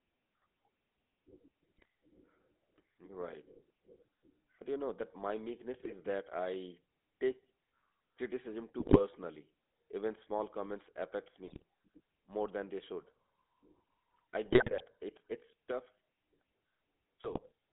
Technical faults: GSM full-rate codec; GSM bit errors

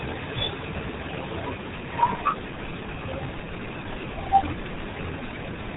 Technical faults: RealAudio 14.4 codec

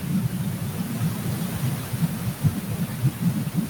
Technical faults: noise suppressor artifacts; speech cut by the noise suppressor

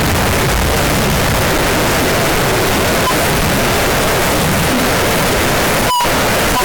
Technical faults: float read as integer

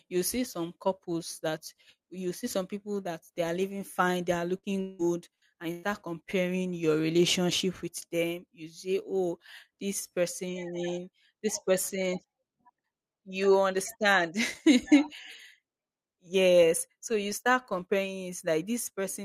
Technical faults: repeated packet loss (robotic sound)

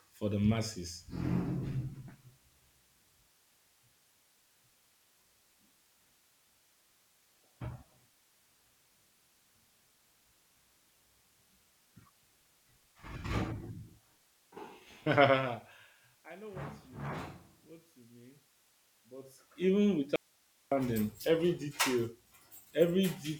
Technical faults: audio dropout to a faint residue

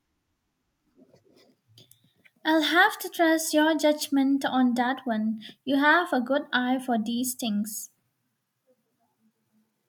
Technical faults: none

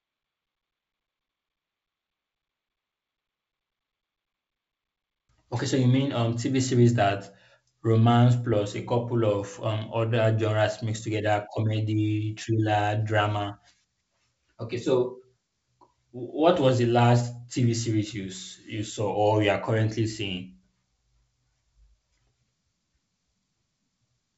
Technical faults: none

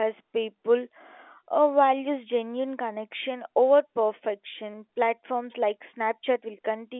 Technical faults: none

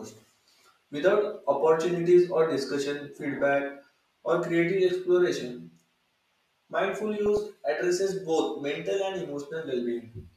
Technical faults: DAB burbling

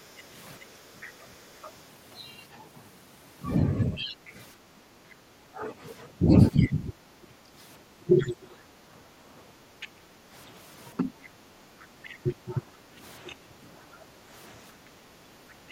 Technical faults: speech suppressed in double talk; other side's voice leaking through; background gated by the echo canceller

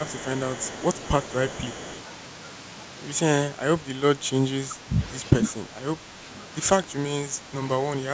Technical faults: echo leak; speech suppressed in double talk

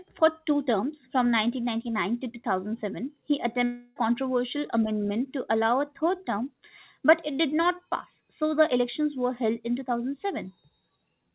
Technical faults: long network dropout

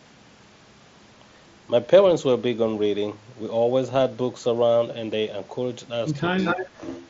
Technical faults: concealed Bluetooth headset packet loss; echo leak; speech suppressed in double talk

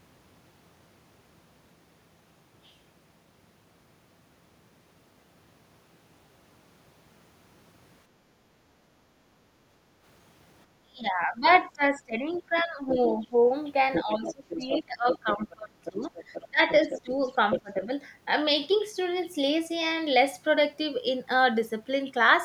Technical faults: background gated by the echo canceller; speech suppressed in double talk; other side's voice leaking through

